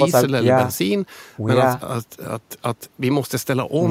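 No technical faults can be heard anywhere in the recording. Nothing in the audio calls for a timestamp or a fix.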